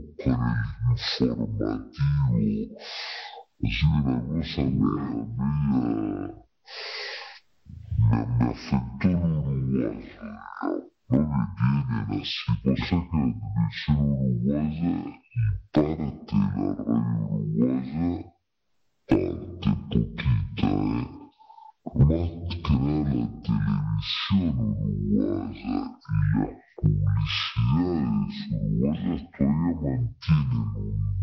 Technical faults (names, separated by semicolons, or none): stereo read as mono